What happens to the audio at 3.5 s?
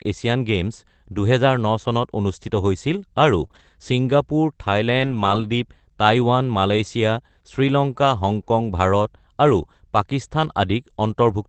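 Around 3.5 s, a short run of lost call packets is patched in two different ways. The whole disturbance spans about 3.43 to 3.61 s.

First comes a lost packet rebuilt from error correction at 3.43 to 3.45 s. The following packet carried a low-bitrate backup copy of the missing 20 ms, and the decoder played that copy instead. Nothing drops out. That slice of speech just turns briefly rougher and grainier. The same thing happens again from 3.55 to 3.61 s, where about 40 ms is rebuilt, which fits two lost packets.

Between them sit two short concealed packet losses, at 3.47 to 3.52 s and 3.52 to 3.55 s. Here no backup copy arrived. The decoder had nothing to play, so it extended the preceding sound, either from its pitch or as shaped noise, then faded back into the real signal. Each gap was about 20 ms. The result is a quick smear or wobble, and a brief consonant can disappear inside it. The Opus call path's 8 kHz bandwidth limit applies to the whole clip and is not a fault at this point.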